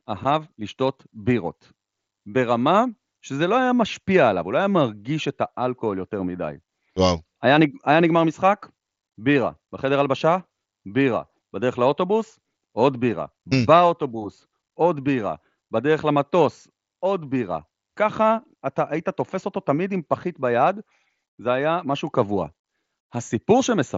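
Nothing in this speech clip stands out as a technical fault; it's simply coming through a Bluetooth headset on the wideband mSBC codec, so the top end tops out around 8 kHz, as you'd expect from that link.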